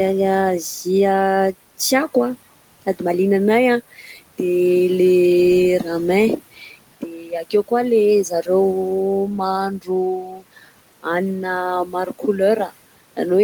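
Noise suppressor artifacts run through the whole clip. The suppressor treats steady background as noise and pulls it down by about 17 dB, frame by frame. The room noise, about 20 dB under the speech, sinks in pauses and rises again under words.

Speech cut by the noise suppressor comes at 3.91 to 4.19 s, 6.54 to 6.76 s, 7.01 to 7.72 s, 8.29 to 8.49 s, 9.79 to 9.9 s, 10.13 to 10.69 s and 11.85 to 12.41 s. Each time the suppressor mistook speech for noise. It dropped the level by about 12 to 19 dB, and those parts sound faint and swallowed.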